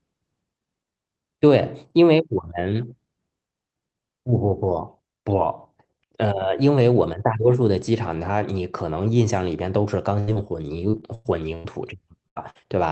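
The speech runs through an Opus call path, with the top end stopping near 8 kHz. At 10.19 to 10.29 s comes a burst of packet loss. About 80 ms of audio never arrived. The receiver stretched the last sound and faded it, so a held buzz or hiss replaces the missing piece.

At 10.33 to 10.37 s there is a short concealed packet loss. Some 20 ms went missing. The gap was patched from the preceding sound and blended back in. It is heard as a brief smear or wobble.

From 10.91 to 11.66 s, repeated packet loss gives a robotic sound. Five separate gaps hit this stretch, totalling 260 ms, the longest 104 ms. About a third of the span is filled-in sound. Each patch sits close to the next, so the sound turns choppy, with pieces lost.

Two more bursts of packet loss follow, at 12.28 to 12.38 s and 12.50 to 12.57 s. They remove about 80 ms and 60 ms. Each is again heard as a fading, held sound before the audio jumps ahead.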